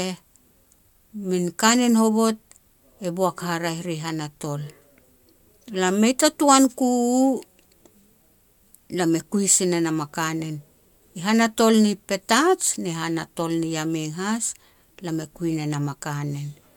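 No technical faults can be heard in this recording.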